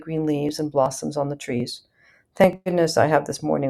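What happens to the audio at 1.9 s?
Nothing goes wrong at 1.9 s; the audio runs through that moment intact, with no dropout, click or other fault.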